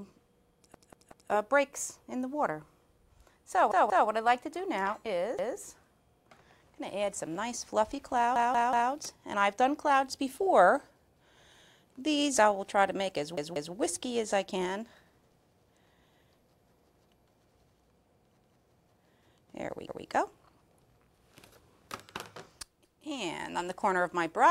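A stuttering repeat of one 186 ms piece of sound, with a hard join at each restart, occurs at 0.74, 3.72, 5.39, 8.36, 13.38, 18.39, 19.88 and 22.85 s. It plays three extra times at 0.74 and 8.36 s, twice at 3.72 and 13.38 s, and once at the rest. This is a repeated buffer. New audio arrived late, so the device replayed its last block, a length that fits an 8192-sample buffer. No audio appears lost afterwards.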